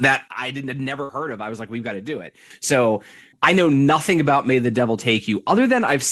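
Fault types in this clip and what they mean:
Sudden gain jump: At 0.28 s the speech and its background noise drop together by about 10 dB in one step, then jump back up at 2.50 s. The likely cause is a gain setting applied instantly, from one sample to the next, with no ramp.
Burst of packet loss: Around 1.03 to 1.12 s the last sound is held and fades for about 56 ms, then the speech resumes with roughly 60 ms missing. Late or lost packets made the receiver stretch and fade the previous audio before skipping ahead.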